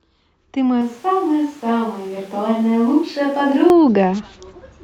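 From 0.81 s to 3.7 s the speech turns roomy and hollow at once, drops by roughly 5 dB, loses bass, and picks up background noise about 30 dB below the voice. This is a switch to a distant microphone, most likely because the close mic's signal was lost and a farther one took over. Unlike a plain gain dip or added reverb, the tone, room sound and noise floor all change together, and snap back abruptly at 3.7 s.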